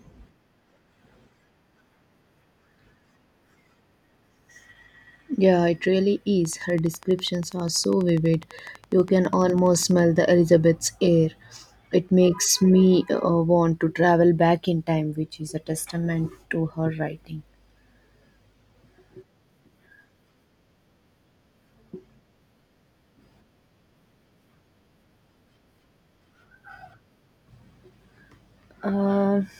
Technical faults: train of clicks

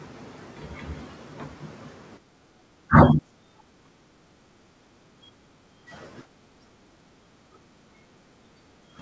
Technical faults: background gated by the echo canceller; speech suppressed in double talk

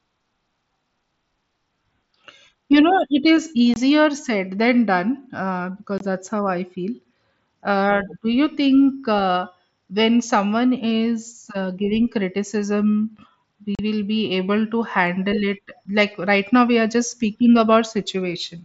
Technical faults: unconcealed Bluetooth headset packet loss

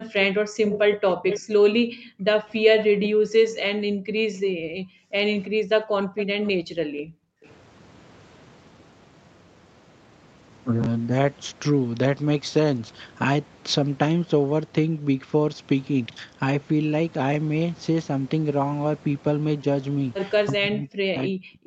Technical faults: background gated by the echo canceller; echo leak; chunks out of order; speech suppressed in double talk

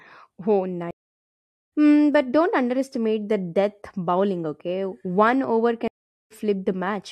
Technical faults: stream reconnect

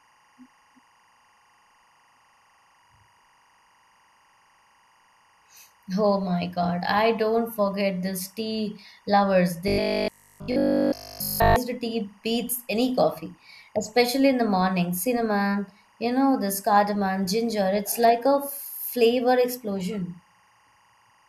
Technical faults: timecode bleed; robotic sound from repeated short buffers

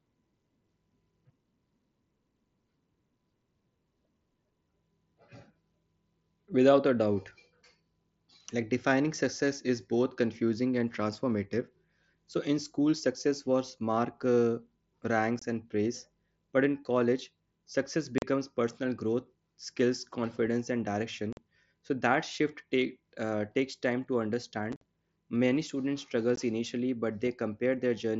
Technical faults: unconcealed Bluetooth headset packet loss

